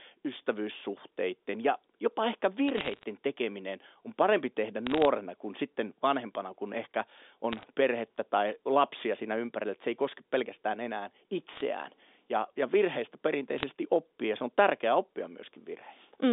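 Bit errors on a digital phone line crackle at 2.68–3.03 s, just after "ystävyyssuhteiden ja jopa ehkä", then at 4.87–5.05 s, 7.52–7.64 s, 11.54–11.61 s and 13.58–13.65 s. Flipped bits in the telephone-band G.711 stream corrupt single samples, well under one percent of bits. Hits on high or sign bits give sharp ticks over the unchanged speech.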